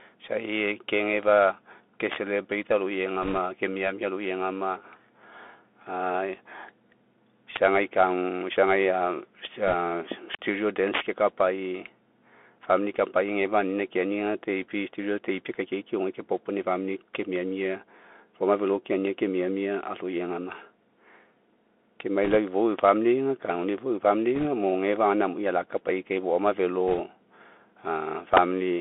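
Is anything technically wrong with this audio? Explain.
Yes. Throughout the speech, a Bluetooth CVSD headset codec limits the band to about 250 Hz to 3.4 kHz. Its one-bit slope coding, which fits a 64 kbps link, adds granular hiss and scratchy sibilants. A spectrogram shows an empty region above 3.4 kHz.

Integer overflow occurs at 2.12–2.16, 7.56–7.65, 9.45, 10.34, 10.94–11.01, 17.15, 22.79–22.89 and 28.37 s. Peaks about 2 to 7 dB over the limit wrap to the opposite sign, which produces violent cracks. On the waveform these appear as sudden vertical flips.

Bit errors on a Bluetooth voice link occur at 3.22–3.38 s, just before "ke miamia", and at 9.67–9.74 and 22.24–22.37 s. They also occur at 24.35–24.46 s, right after "ifou eu", and at 26.88–26.99 s, after "amui alakapai kai foama". With a few percent of bits flipped, the decoder drifts briefly and adds a rushing crackle without loud clicks. 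A spectrogram shows broadband smears at these points.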